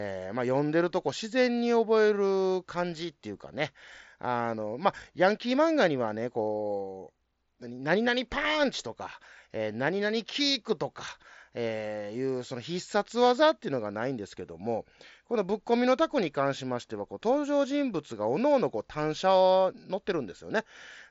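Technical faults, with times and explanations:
The speech comes through a Bluetooth mSBC headset codec link working as intended, with the band ending near 7.7 kHz and the light graininess on louder passages that this wideband codec leaves at around 61 kbps.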